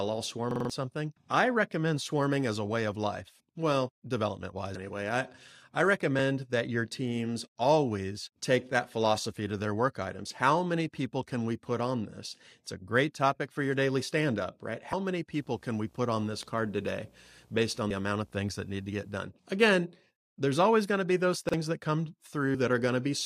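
At 0.51 to 0.70 s, just before "something I recommend swarming", a repeated buffer occurs: replacement audio arrived late, so the device replayed its last block of about 46 ms four more times, which fits a 2048-sample buffer. The result is a hard-edged stutter and roughly 200 ms of lost audio.

At 4.75 s and again at 14.93 s, after "daily stand up right", compressed frames are skipped. Roughly three 32 ms frames go unplayed, so the sound jumps ahead by about 100 ms.

From 15.39 to 19.12 s, video or display buzz sits about 35 dB below the signal. A picture source coupling into the audio produces a 59.94 Hz field-rate buzz with hash above it, plus a 15.7 kHz line-rate tone.

At 21.49 to 21.54 s, after "going to be those", another repeated buffer plays the same 46 ms block once extra, producing a brief stutter and losing about 50 ms.

At 22.54 s, roughly five frames are skipped, a jump of about 150 ms.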